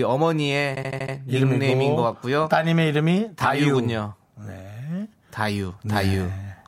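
From 0.75 to 1.14 s the speech stutters: the same 78.4 ms slice of audio plays over and over, five extra times, before the sentence moves on. This is repeated frames. A short run of compressed frames, a length that fits three frames, was written or sent more than once, and the decoder played each copy faithfully. The duplicates add about 392 ms, so everything after the stutter arrives that much later.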